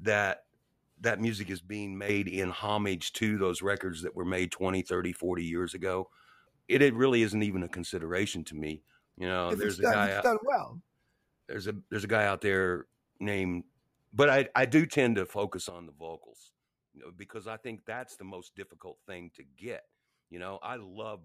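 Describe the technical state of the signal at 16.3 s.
At 16.3 s the signal is inside a sudden gain jump that starts at 15.70 s, right after "do tend to focus", and lasts to the end at 21.25 s. The level drops by about 12 dB in a single step, likely from a digital gain change applied without a ramp, so speech and background noise fall quieter together.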